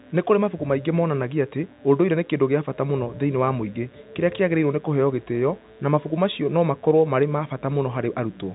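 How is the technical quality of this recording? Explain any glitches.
A mains buzz runs under the speech for the whole recording, heard through a telephone-band channel that stops at about 3.8 kHz, consistent with G.711 telephone coding. Throughout, sharp spikes leaking in twice per 60 Hz cycle produce harmonics into the kilohertz range: a steady, raspy buzz roughly 35 dB below the speech.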